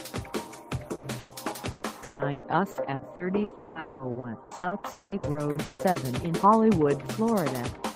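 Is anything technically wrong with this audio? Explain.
Yes. Two bursts of packet loss occur at 0.95 to 1.06 s and 1.19 to 1.34 s. Each is a single hole of about 80 and 120 ms that the receiver bridges by extending and fading the last sound before jumping ahead. Each is an isolated held-then-resumed gap.

Repeated packet loss (robotic sound) runs from 1.71 to 5.98 s. About twenty holes, the longest 200 ms, are patched one after another, covering roughly 43% of the stretch. The result is sustained choppy sound with pieces missing rather than one clean break.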